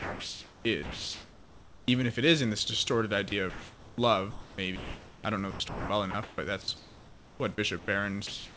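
A voice detector that likely misjudged quiet speech as background stopped transmission at 0.0 to 0.65 s and again at 8.27 to 8.57 s. About 290 ms and 110 ms of real speech were lost, and steady synthetic hiss plays where that sound should be.

During pauses the sender likely switched to discontinuous transmission, and the receiver generated comfort noise at 0.0 to 1.88 s, 4.31 to 5.24 s (just before "I don't know") and 7.79 to 7.88 s. The room's real background, about 23 to 26 dB below the speech, gives way to a smoother synthetic noise, at the same level in the 7.79 s pause.

The detector likely toggled repeatedly at 3.29 to 3.98 s, right after "is in this distorted", and at 5.51 to 7.40 s, after "I don't know". Syllables and word edges are chopped out.

A slow detector likely clipped the onset at 4.54 to 4.58 s, removing 40 ms so the word starts abruptly. The speech also carries the G.722 call path's coding, with nothing above 8 kHz.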